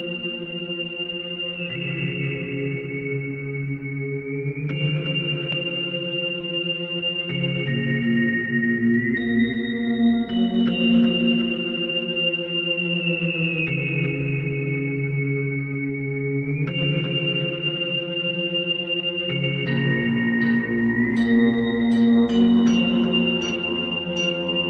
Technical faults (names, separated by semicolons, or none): none